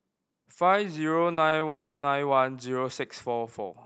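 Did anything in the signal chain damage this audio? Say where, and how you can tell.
Yes. Short concealed packet loss occurs at 1.33–1.39, 1.49–1.53 and 1.59–1.63 s. These 20–40 ms network gaps were patched by extending the preceding speech, leaving brief smears.

A long network dropout runs from 1.67 to 2.05 s. A concealment sound fades into about 0.27 s of silence, and speech resumes without the lost portion. The likely cause is a network outage.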